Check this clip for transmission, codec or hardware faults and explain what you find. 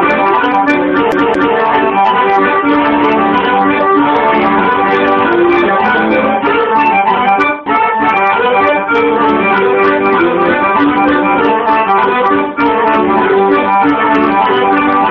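One hardware-type fault is present: a CD stuck on one turn. From 1.12 s to 1.57 s the audio stutters. A short piece about 0.22 s long plays twice in a row. A brief mute marks each jump back. The cause is the player's laser losing its place at a scratch. It falls back one track at the same point on each rotation. That repeats the same slice. The result is the quick, even stutter of a skipping disc.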